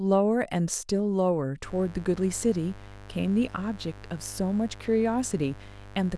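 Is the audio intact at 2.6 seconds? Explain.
No. At 2.6 s the speech sits on a mains buzz that starts at 1.64 s and runs to the end of the clip, roughly 20 dB below the speech. Sharp switching spikes at 100 per second, twice each 50 Hz cycle, enter the signal path and give a steady, raspy buzz. A spectrogram shows evenly spaced horizontal lines at multiples of 50 Hz reaching into several kHz, and the waveform shows small regular spikes between words.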